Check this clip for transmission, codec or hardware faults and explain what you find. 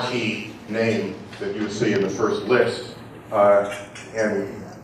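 One fault is present for the whole clip: channels drifting apart. Clocks roughly 30 ppm apart let the inter-channel delay creep toward 0.15 ms, so a mono sum shows slow flanging and notches sliding downward across a spectrogram.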